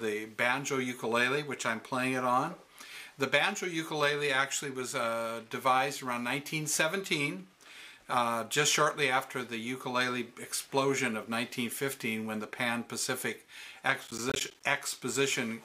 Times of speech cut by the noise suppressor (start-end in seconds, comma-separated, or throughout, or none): none